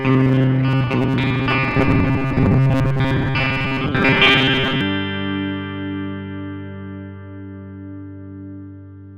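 From 0.01 to 4.81 s a rigid metallic buzz at 133 Hz sits on the sound: robotic sound from repeated short buffers, likely a 7.5 ms chunk replayed while most real audio is skipped. A spectrogram shows flat harmonics every 133 Hz, and the waveform repeats identical cycles.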